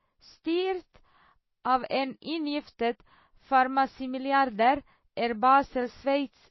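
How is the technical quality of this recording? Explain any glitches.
The quality is poor: the speech carries plainly audible compression damage from start to finish. Throughout, the sound is likely shaped by MP3 compression, with nothing above 5.8 kHz and a watery, swirling texture on the voice, with sibilants turning metallic and chirpy. Starved of bits, which fits a very low rate around 24 kbps, the encoder chops the treble at a fixed point and drops weaker frequency lines that flicker in and out between frames. A spectrogram shows a hard flat ceiling at 5.8 kHz and speckled, patchy energy below it.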